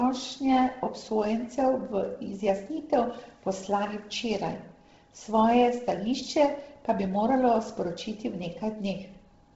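The speech was likely squeezed through Bluetooth LC3 compression at a very low bitrate, which fits roughly 16 kbps in 10 ms frames. Throughout, nothing survives above 7.7 kHz, and heavy damage leaves the voice breathy and grainy, with noise-filled upper frequencies.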